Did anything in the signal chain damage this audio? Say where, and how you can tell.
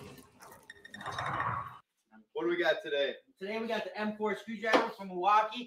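Yes. In call processing, a noise suppressor applied to music or sounds keeps swinging the gain by roughly 15 dB. The waveform envelope pumps, and sustained spectrogram bands thin and flicker.

Sound cut by the noise suppressor appears at 0.0–1.08 s, 1.67–2.35 s and 3.21–3.42 s, sinking about 18, 21 and 20 dB. Held energy darkens while attacks survive.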